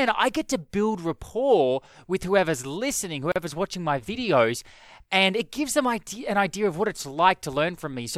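It's a speech clip with a gap at a join of encoded pieces. Between "rapport with whoever's listening" and "watching my videos and", a 39 ms silence opens at 3.32 s with smeared edges. Encoder delay and end padding were left in when separately encoded pieces were joined.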